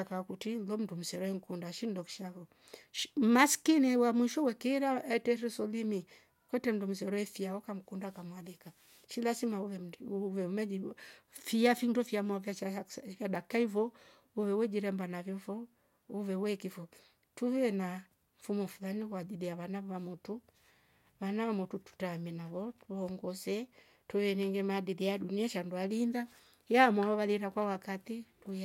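Speech, with nothing technically wrong to report.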